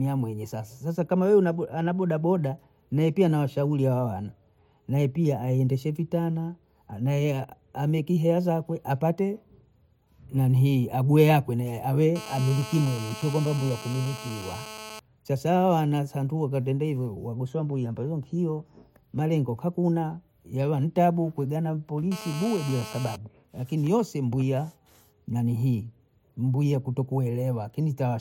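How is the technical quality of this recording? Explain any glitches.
GSM phone buzz interrupts the speech twice, from 12.16 to 15.0 s and from 22.12 to 23.16 s. A nearby 2G phone on a call pulses its transmitter about 217 times a second, and the audio circuitry rectifies those bursts into a hard, raspy buzz about 14 dB below the speech. Unlike mains hum at 50 or 60 Hz, it sits at 217 Hz and is harsh with harmonics.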